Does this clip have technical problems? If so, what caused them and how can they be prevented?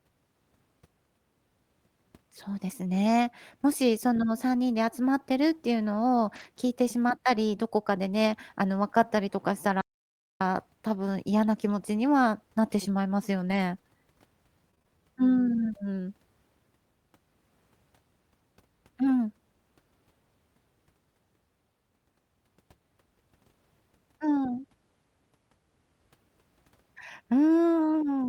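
Yes, there are three kinds of fault.

Lost packet rebuilt from error correction, at 6.35–6.45 s and again at 13.47–13.57 s: packets went missing, and the decoder replaced each loss with the low-bitrate backup copy carried in the next packet. There is no gap, but about 60 ms sounds rougher and noisier each time, which fits about three separate lost packets. Enabling Opus in-band error correction with enough redundancy and reducing network loss keeps these repairs rare.

Playback stall, 9.81–10.41 s: the output goes completely silent for about 0.6 s in mid-flow, likely because the player ran out of buffered data or its playback thread was blocked. The sound then resumes. A larger jitter buffer and a high-priority audio thread that never waits on other work prevent this.

Repeated packet loss (robotic sound), 14.71–14.99 s: packets were lost or late four times in quick succession, the longest gap 19 ms. 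Each hole was patched by stretching the preceding sound, so nearly half of that stretch is concealed and the audio turns choppy. A steadier network path and adaptive buffering that absorbs bursts of loss avoid this.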